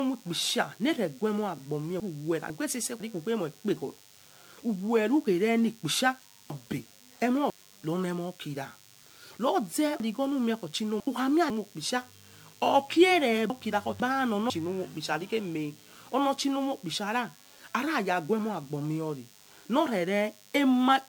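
A DECT cordless phone buzz runs under the whole clip, a thin, steady tone at 100 Hz with a dense ladder of harmonics, sitting about 30 dB below the speech. The pitch points to a DECT handset or base nearby: it transmits a short radio burst every 10 ms, and the audio circuitry rectifies that burst into the signal path, so the interference appears as a constant buzz rather than a hiss.

The speech also sounds swirly, smeared and hollow, with blurred consonant attacks and spectral gaps, and nothing remains above 20.1 kHz. This is too much damage for the bitrate alone, which fits MP3 at around 125 to 128 kbit/s. The likely cause is generation loss from roughly seven decode and re-encode passes. Each pass quantises on a shifted frame grid, so the noise and holes accumulate.

There are chunks out of order at four points. Just after "noreguemo asbo", the section from 2.0 to 3.0 s is jumbled. Between "werukhere ni kpisha" and "rone mokira", the same happens from 6.5 to 7.5 s. 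The pattern repeats from 10.0 to 11.5 s and from 13.5 to 14.5 s. The material is cut into 500 ms blocks, and one block plays one slot late, or two slots late in the 10.0 s case. No audio is lost, but each swap creates three hard joins, heard as a garbled moment.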